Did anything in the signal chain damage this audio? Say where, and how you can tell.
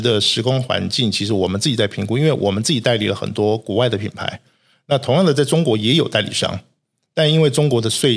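No, nothing in the signal chain audibly damages this speech at any stage.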